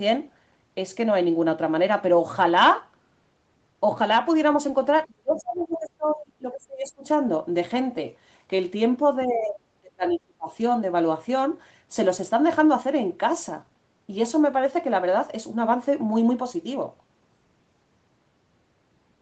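Speech suppressed in double talk, 5.06 to 7.05 s: the voice dips by about 25 dB for roughly two seconds. The likely cause is the echo canceller failing to separate the talker from loudspeaker echo while both sides spoke, so it turned both down.

Other side's voice leaking through, 5.34 to 5.41 s and 5.71 to 5.76 s: two brief, faint scraps of a second voice sit well below the talker. This is likely residual loudspeaker sound that the canceller left in the microphone signal.

Speech suppressed in double talk again, 9.26 to 10.53 s: the drop is deeper, about 35 dB, and the voice nearly vanishes. The likely cause is the same overlap with the other side's speech.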